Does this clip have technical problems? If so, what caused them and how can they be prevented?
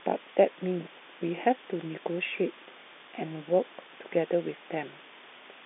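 Yes. Low bit depth with dither runs throughout: the speech was rounded to very few levels, consistent with about 7 bits, leaving an even hiss roughly 20 dB beneath it. To prevent this, keep at least 16 bits through every stage before the telephone encoder.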